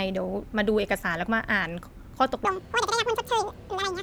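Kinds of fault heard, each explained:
Audio read two samples at a time (double speed): From 2.45 s to the end, each pair of samples is taken as a single frame. The speech then runs twice as fast and sounds a full octave, 12 semitones, higher.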